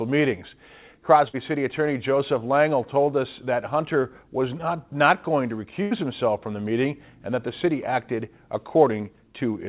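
At 1.28 to 1.35 s, a burst of packet loss drops about 60 ms of audio. The receiver extends the last sound for 54 ms, fading it to a held buzz or hiss before resuming later on. At 4.01 to 4.05 s, short concealed packet loss leaves a 20 ms hole, patched with 12 ms of extrapolated sound and blended back, heard as a brief smear or wobble. At 5.83 to 5.93 s, a second burst loses about 80 ms, concealed by 82 ms of decaying continuation that ends in a jump forward. Throughout, the call path carries nothing above 4 kHz, which fits the G.711 narrowband codec.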